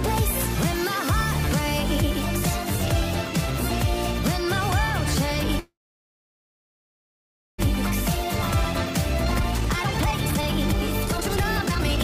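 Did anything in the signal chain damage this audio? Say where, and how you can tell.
Yes. Network: packets likely stalled and emptied the jitter buffer. This call audio freeze fills 5.59 to 7.60 s with a brief fade, then silence, and nothing is lost.

Buffer: a jitter buffer speed-up drained the backlog by cutting pitch periods. From 8.64 s the audio runs at 132% speed, with pitch unchanged and a hurried feel.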